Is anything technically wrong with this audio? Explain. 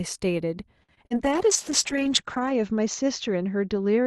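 Yes, two faults. Repeated packet loss (robotic sound) runs from 0.83 to 1.30 s: four gaps, the longest 52 ms, are patched by stretching the last sound, leaving choppy speech. A call bitrate drop starts at 1.24 s and lasts to the end: Opus falls from 64 to 8 kbps and narrows from 12 kHz to 8 kHz, so the speech turns rough and muffled.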